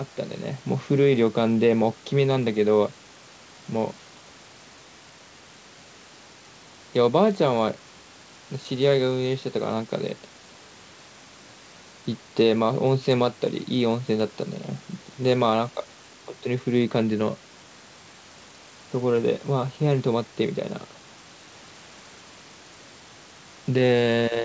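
Nothing goes wrong anywhere in this speech recording.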